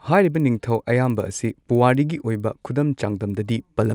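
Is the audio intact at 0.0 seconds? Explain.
No. At 0.0 s the speech already carries the resampler restarted on every block fault, which runs through the whole clip. Each 50 ms block was converted from 24 kHz to 48 kHz in isolation, so every block edge ticks at 20 Hz. Unlike mains hum, these ticks vanish whenever the sound stops.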